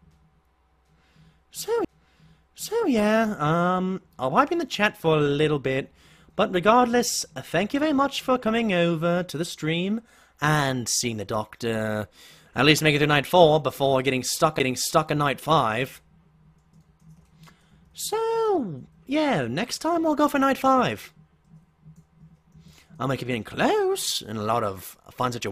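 Right at 1.85 s there's a CD skip: the player drops out for a few milliseconds, which comes across as a tiny tick or gap, and then the sound picks up from a different spot. What's happened is the laser lost its track, probably from a knock or a flaw on the disc, and landed on another turn of the spiral, so the audio lurches ahead or back by one or more of those turns instead of continuing smoothly.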